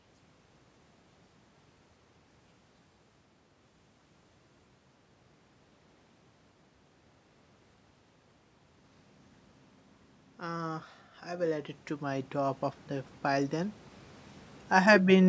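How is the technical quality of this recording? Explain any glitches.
The one technical fault in this speech recording is automatic gain rising, between 10.4 and 13.84 s. The call's automatic gain control judged the input too quiet and raised its gain gradually by about 9 dB over those three and a half seconds. Voice and room noise swell together, so the background grows along with the speech. On a waveform the envelope widens steadily across that span. On a spectrogram every band, including the noise floor between phrases, brightens evenly. Nothing appears above 8 kHz, which is the call's microphone processing.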